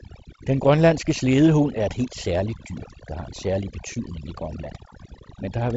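Throughout this speech clip the background drops to an unnatural near-silence dotted with twinkling specks, and the voice's softer parts seem to dissolve. That is overdone noise removal: a noise reduction stage set far too aggressively cut individual frequency bands whenever they sat close to its noise estimate, taking quieter voice detail along with the hiss. Beneath this, the sound stops near 7.7 kHz with light coding grain, consistent with G.722 wideband telephone coding at a reduced rate such as 48 kbit/s.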